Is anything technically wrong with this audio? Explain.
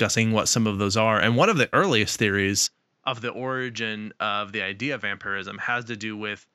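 Yes. From 2.67 s to the end, just after "one of the earliest", the sound abruptly turns duller and about 10 dB quieter, with no gap, nothing above 7.6 kHz, and a new faint noise floor. The likely cause is the input switched to a poorer device.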